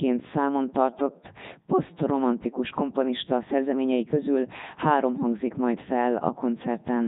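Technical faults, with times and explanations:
Throughout, Codec 2 vocoder: the speech has a heavily robotic, buzzy character across the whole clip, with a synthetic quality consistent with Codec 2's highest-rate 3.2 kbit/s mode. The codec does not preserve the waveform. It sends only pitch, voicing, energy and a coarse spectral envelope, and the decoder rebuilds the speech from a sum of sine waves. The natural phase and fine detail are therefore gone, leaving a mechanical, heavily degraded sound.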